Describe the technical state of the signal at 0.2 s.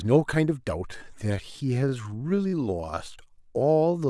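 No fault is audible at 0.2 s; the speech signal is intact at that moment.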